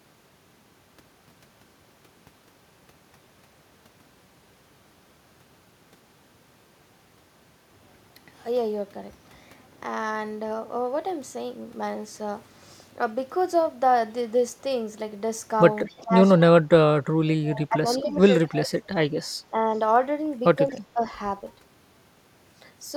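At 15.85 to 16.0 s a faint delayed copy of the speech is audible, an echo leak lagging about 230 ms behind and sitting very low, some 30 to 35 dB under the direct voice. This is likely a far-end loudspeaker echo that the echo canceller did not fully remove. On a spectrogram it looks like a dim, time-shifted ghost of the speech harmonics. A shorter echo scrap returns at 20.71 to 20.75 s with the same 230 ms lag.

Overlapping that first echo, speech is suppressed in double talk from 15.88 to 16.13 s, and again at 16.5 to 16.71, 17.39 to 18.16, 18.49 to 19.09, 19.51 to 19.58 and 20.72 to 21.01 s. The likely cause is the canceller mistaking the talker for echo while both sides spoke and turning everything down. The voice dips by roughly 15 dB in three of these and about 25 dB at 18.5 s. The drop is far deeper, near 30 dB, at 16.5 s and only slight at 19.5 s. On a waveform these show as abrupt notches in the envelope, and on a spectrogram they appear as faded or gapped bands.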